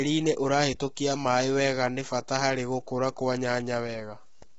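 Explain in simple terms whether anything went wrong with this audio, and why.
Yes. From start to finish the speech sounds rough and grainy, with a hiss between the voice's tones and nothing above about 7.7 kHz. The likely cause is low-delay AAC compression squeezed hard. Simple muffling would sound dull but clean; this grit marks compression.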